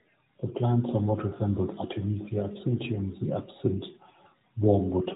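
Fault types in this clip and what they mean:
Nothing stood out on listening to this speech clip.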